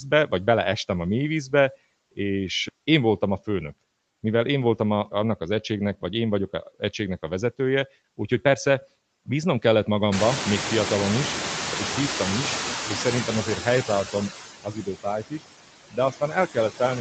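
Noise suppressor artifacts run through the whole speech clip: steady background is pulled down by about 16 dB between phrases, visible on a spectrogram as blotchy, flickering gaps in the noise floor. This is clearest after the room noise climbs around 10 s.

Speech cut by the noise suppressor comes at 15.23–15.44 s, with dips down to about 16 dB, and again at 15.91–16.81 s, down to about 14 dB. Speech energy there was mistaken for noise, so soft sounds come out swallowed. The waveform shows brief sagging notches, and the spectrogram shows faded patches in the speech bands.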